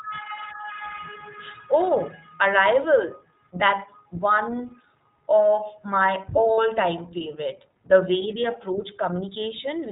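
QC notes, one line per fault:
Throughout: iLBC codec. The speech is narrowband, with nothing above 4 kHz, so it sounds thin and boxy. The damage is plainly audible as a rough, slightly synthetic edge on every syllable. This fits iLBC's 20 ms, 15.2 kbps mode.
6.54 to 6.60 s: lost iLBC frames. About 40 ms of the speech is replaced by a brief held, faintly buzzy vowel, which fits two lost 20 ms frames. The decoder repeats the last pitch cycle with noise to fill the gap. Each iLBC frame is decoded independently, so clean speech returns immediately afterwards.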